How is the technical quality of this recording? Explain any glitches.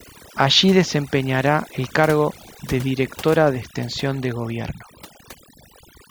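Quality's let down by overdone noise removal running the whole way through. The denoiser's set so hard it's gating out quiet bands along with the noise, so the background drops and breaks up into twinkly specks.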